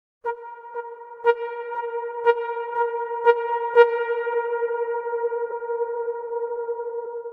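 A recording of everyday sounds, with compressed frames skipped at 4.33, 5.50 and 7.04 s. Each time the audio jumps ahead, losing about 70 ms first, then about 50 ms twice. That fits two or three dropped 26.1 ms frames. Overlapping frames smear each join into a brief blip.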